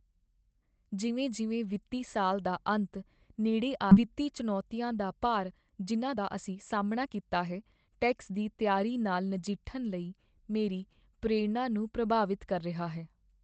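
At 3.91 s the speech jumps forward with no gap, losing about a second of audio: a skip ahead, where a waiting stretch was dropped and both sides joined directly. From 5.50 to 8.38 s the speech sounds hurried at unchanged pitch, running about 115% speed: a jitter buffer speed-up that trimmed roughly 0.4 s of pitch periods to cut excess delay.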